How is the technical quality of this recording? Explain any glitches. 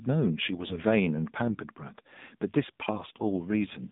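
The recording is plainly limited by narrowband mobile coding, with two short bursts of transmission damage in the speech.

AMR narrowband mobile codec, throughout: the whole clip sits in a telephone band from about 150 Hz to 3.7 kHz, so nothing bright survives above it. The codec rebuilds speech from a vocal-tract model driven by sparse pulses in each 20 ms frame. Here the buzzy, synthetic edge on the voice is plainly audible, which fits a low AMR-NB mode around 7.4 kbps.

AMR bit errors, 0.56 to 0.84 s and 3.08 to 3.20 s: over these spans, which match roughly fourteen and six 20 ms frames, some of the less protected bits in each frame were flipped in transit. The checksum on the critical bits still passed, so the decoder used the damaged frames, misplacing the excitation pulses and skewing the fine pitch, gain and spectral values. The error rate points to something like one bit in twenty. 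Pitch and loudness hold roughly steady, but the voice turns hoarse, scratchy and gargly.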